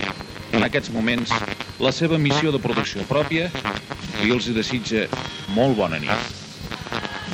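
From 0.35 s to 1.67 s there is processor overload crackle. The system could not finish its tiny audio buffers on time. Dozens of deadlines were missed in quick succession. Each buffer points to a length of under a millisecond. Every missed one was skipped outright, leaving a small hole with hard edges. Packed together, these holes form a gritty, tearing crackle over the sound. It stops once the load eases.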